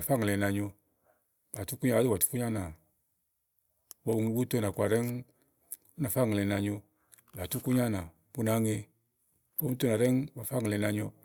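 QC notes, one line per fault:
No technical faults are audible in the speech signal at any point.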